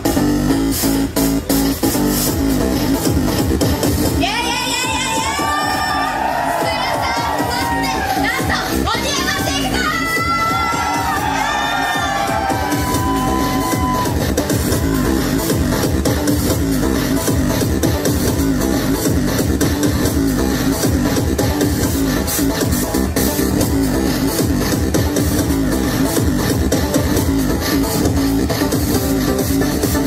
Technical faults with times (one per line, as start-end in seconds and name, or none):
5.70-5.90 chunks out of order
14.20-14.40 chunks out of order